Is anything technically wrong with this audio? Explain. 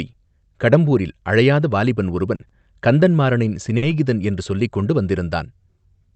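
Yes, there are a few call-transmission glitches in this speech, all bunched in the middle.

Short concealed packet loss, 2.35 to 2.42 s: about 40 ms of audio never arrived in time, so the receiver extended the last sound and blended back into the real audio. You hear a quick smear where that slice is simply gone.

Short stalls from late packets, at 2.47 to 2.52 s and 3.77 to 3.94 s: a packet showed up late and the jitter buffer ran dry, so the receiver held the current sound until it arrived. Nothing's lost, but a sound hangs on too long, about 20 ms the first time and 50 ms the second, with a slight buzz or dip.

The call codec itself just puts the high end at a ceiling around 8 kHz.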